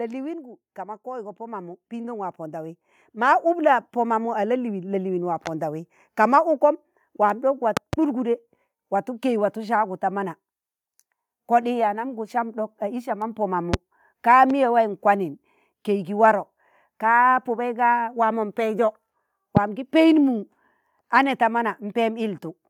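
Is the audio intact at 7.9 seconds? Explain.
No. A loud pop sits at 7.77 to 7.96 s: two sharp thumps, about 20 dB above the speech, likely from a voltage pulse added to the signal.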